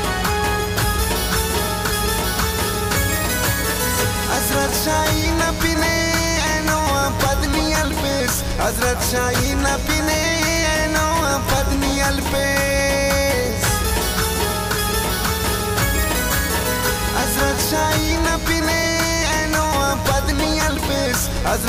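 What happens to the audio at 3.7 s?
At 3.7 s you're hearing the mains buzz, which runs through the whole clip rather than starting there. It's a steady, raspy buzz sitting roughly 10 dB below the audio itself. The hum is tied to 60 Hz mains: something like a dimmer, a rectifier or a missing shield lets sharp switching spikes in twice every cycle, so harmonics of 60 Hz stack up well into the kilohertz range.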